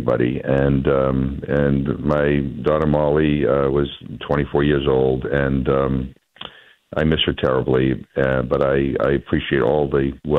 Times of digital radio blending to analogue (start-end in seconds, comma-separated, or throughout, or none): none